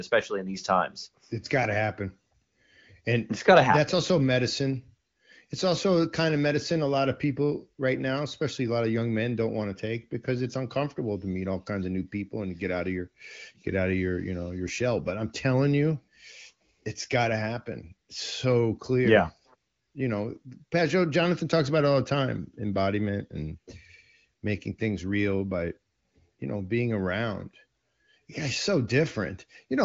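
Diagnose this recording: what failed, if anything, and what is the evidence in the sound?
No stage of this speech recording has failed. The audio carries nothing above 7.5 kHz, as expected from an AMR wideband (HD Voice) codec path, and its character points to one of that codec's higher rates, around 18 kbit/s.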